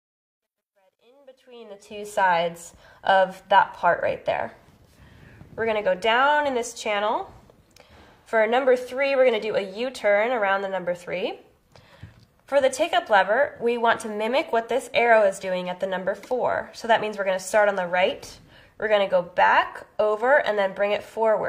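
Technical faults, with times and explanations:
0.00 to 2.19 s, truncation distortion on a fade: the fade-in rises in overall level up to about 2.19 s, but its quiet start is rough. From 0.00 to about 1.33 s it's at its worst, gritty and grainy. The fade stage is chopping the signal to too few bits with no dither, which fits around 12-bit resolution, so the low-level waveform collapses into a few coarse square steps.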